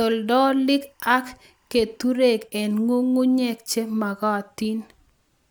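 From 0.0 to 2.0 s, timecode bleed sits faintly under the speech, far below its level: linear timecode leaking in from a nearby track or cable, framing at 23.976 frames per second. It chirps steadily around 1 and 2 kHz and shows on a spectrogram as thin, constant bands at those frequencies.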